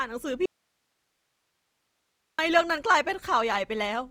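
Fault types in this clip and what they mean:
Opus compression: Grainy, rough, noise-filled tone across the full band up to 20.4 kHz, fitting the likely CELT mode near 24 kbps; it sounds gritty rather than swirly like MP3.
Audio dropout to a faint residue: From 0.46 to 2.39 s the signal abruptly vanishes for about 1.93 s, leaving only hiss about 50 dB down, likely a live path after the break, unlike a fade.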